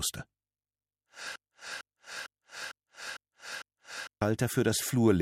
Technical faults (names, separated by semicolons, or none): broken-record loop